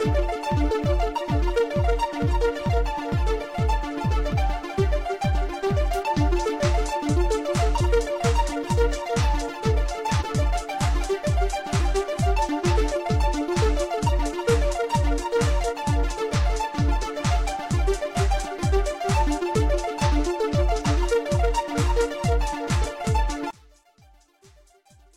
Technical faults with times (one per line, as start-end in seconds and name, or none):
0.65-0.71 compressed frames skipped
4.28-4.32 compressed frames skipped
7.76-7.81 compressed frames skipped
10.17-10.24 compressed frames skipped
20.81-20.86 compressed frames skipped
22.81-22.87 compressed frames skipped
23.50-25.17 one channel inverted